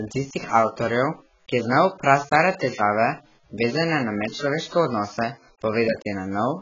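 Speech that sounds dull and smeared from start to finish, with a warbling, fizzy texture on sibilants and nothing above 7.7 kHz. This is likely heavy AAC compression, an AAC-LC stream at a bitrate near 12 kbps, lowering the cut-off and leaving spectral holes.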